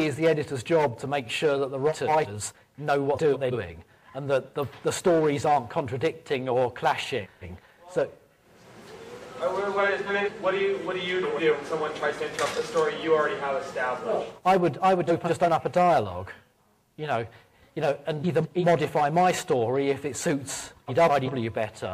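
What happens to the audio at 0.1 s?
Nothing goes wrong at 0.1 s; the audio plays through that moment intact, with no dropout, click or distortion.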